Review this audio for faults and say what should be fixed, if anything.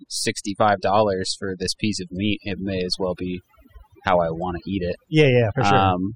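Overdone noise removal runs through the whole speech clip. The denoiser is pushing individual frequency bands way down whenever they sit near its noise estimate, so the quieter parts of the voice get swallowed too. That leaves a lowered background that breaks up into little twinkling specks. Back off the reduction amount, or rerun it on the original recording with a gentler setting, so the cleanup stops eating into the speech.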